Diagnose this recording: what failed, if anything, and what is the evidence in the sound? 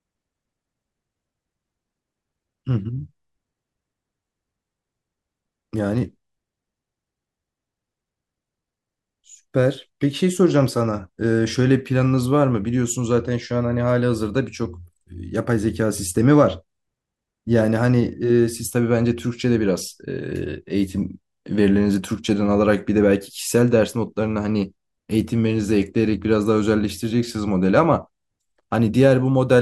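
Nothing in the speech signal points to a failure at any stage of the chain, from the analogue front end through to playback.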